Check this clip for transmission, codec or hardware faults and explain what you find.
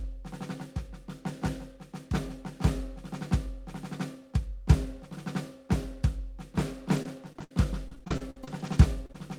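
Yes, there are transmission faults: repeated packet loss (robotic sound) in the music at 6.96–7.51 s and again at 7.88–9.15 s. Lost packets are patched by stretching the previous audio, with gaps up to 63 ms, giving choppy stutters. On a spectrogram these appear as smeared, repeated vertical slices; on the waveform they show as looped segments.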